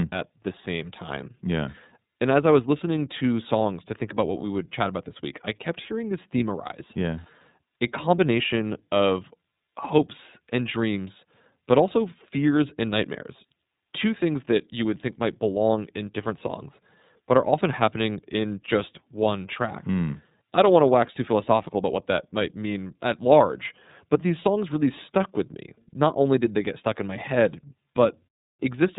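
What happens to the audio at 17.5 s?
At 17.5 s, as everywhere in this speech, the iLBC codec is audible. Nothing passes above 3.8 kHz, and independently coded 30 ms frames leave a rough, synthetic grain that plain band-limiting wouldn't add.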